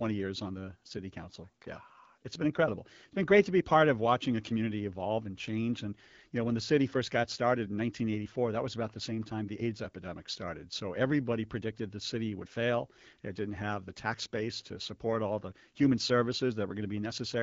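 No faults detected; the speech comes through the AMR-WB (HD Voice) wideband path at 12.65 kbit/s, with its band reaching about 7 kHz.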